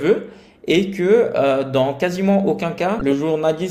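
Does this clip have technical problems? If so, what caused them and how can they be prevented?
Yes. Damaged data in a compressed stream causes a brief glitch from 2.98 to 3.01 s. Corrupted bytes make the decoder misread those frames. It loses sync and must hunt for the next valid frame header. Use checksummed, reliable transfer and keep metadata out of the audio stream.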